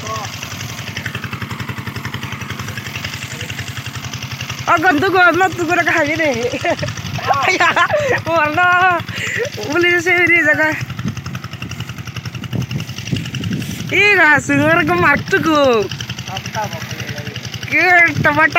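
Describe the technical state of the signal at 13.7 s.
At 13.7 s the signal is intact, with no audible fault at that moment.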